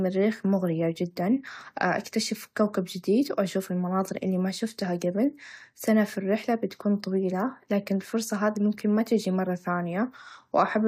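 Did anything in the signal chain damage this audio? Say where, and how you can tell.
No, nothing in the chain has left an audible mark on this speech recording at any stage.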